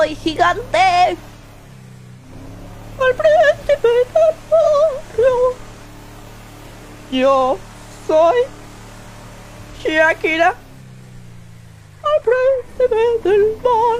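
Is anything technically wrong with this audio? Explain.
Yes. AAC frame loss with concealment occurs at 1.37–1.44 s, 4.62–4.67 s and 9.73–9.80 s. Each gap of about 43 ms fits one lost frame. The decoder patches it from the previous spectrum, leaving a brief smeared, noisy, phasey blip.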